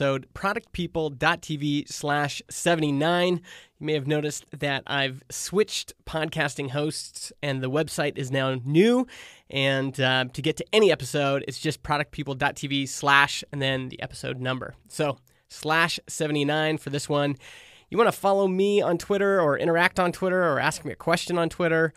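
Nothing in the speech stood out as a technical problem on listening.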